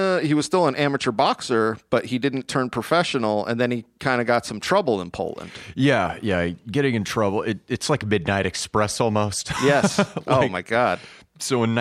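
Speech recording with no audible technical faults.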